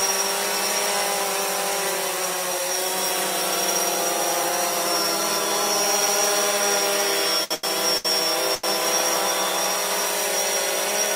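Between 7.44 and 8.65 s there are four short stalls from a late packet, at 7.44, 7.55, 7.97 and 8.55 s. Each time the jitter buffer ran dry, so the receiver held the last sound for about 70 to 90 ms until the late packet arrived, then resumed from the same point. Nothing is lost, but each stall adds to the delay and is heard as a briefly frozen sustain with a slight buzz or dip.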